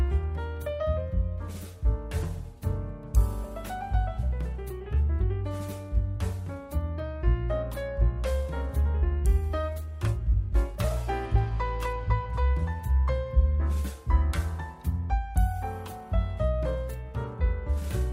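Nothing here sounds wrong at all; the audio just runs along steadily with no glitches to point out.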